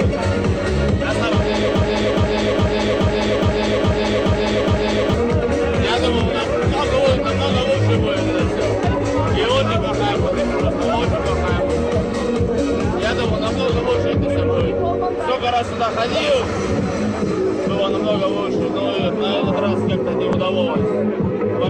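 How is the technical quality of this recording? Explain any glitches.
The recording has one clear glitch, a broken-record loop near the start. From 1.75 s to 5.14 s, a fragment of about 0.42 s plays eight times back to back, each repeat identical. The player, encoder or stream likely stalled and kept resending the last fragment it held, so the audio meant for those seconds is lost. Unlike an echo, the repeats don't fade or overlap. Unlike a dropout, there's no silence, just the same piece cycling before normal playback resumes.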